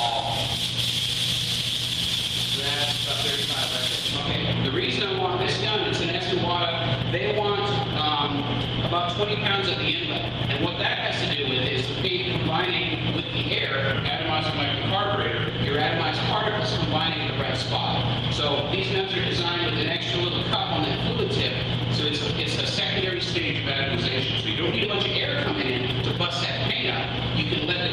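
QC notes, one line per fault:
13.94–15.49 s and 23.34–24.84 s, drift correction step: each time the audio abruptly slows by 5.78% and drops 103 cents, about a semitone, then snaps back to normal after roughly 1.5 s. Speed and pitch move together in a single step, which points to clock-matching software that likely lowered the playback rate to refill its buffer. Tape wow glides and varies continuously, and a pitch shifter would leave the tempo unchanged.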